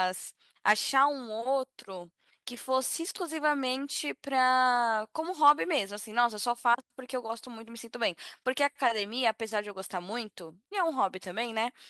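No faults can be heard anywhere in the recording; level, timing and continuity hold steady throughout.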